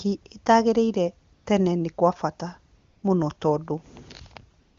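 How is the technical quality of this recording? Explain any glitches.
The pauses in this speech have AMR comfort noise. In three gaps the real background drops out and is replaced by a smooth, steady hiss that switches in and out: from 1.33 to 1.45 s just before "tene nĩ kwa bata", from 2.77 to 3.03 s between "tene nĩ kwa bata" and "mũno tondũ", and from 4.59 to 4.77 s at the very end. Each time, the phone judged the talker silent and stopped sending speech frames. The receiver then synthesized filler noise from a rough description of the background's level and spectrum. The AMR wideband (HD Voice) speech itself sounds clean, which points to a high coding rate.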